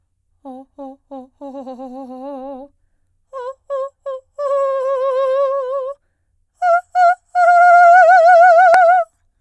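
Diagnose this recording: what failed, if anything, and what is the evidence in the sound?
Nothing in the signal chain appears to have failed, since the music carries no audible technical fault at any stage from capture through to playback.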